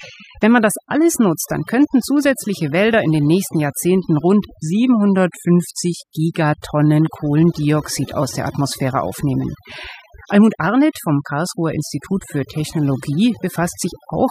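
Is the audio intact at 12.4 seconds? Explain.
No. At 12.4 seconds, as everywhere in this speech clip, the background falls to near silence speckled with twinkling, and the voice has its quieter details hollowed out. This is overdone noise removal, present from start to finish. The noise reduction was pushed too hard, so any frequency band close to its noise estimate is cut deeply or muted, and the softer parts of the voice are stripped away with the noise.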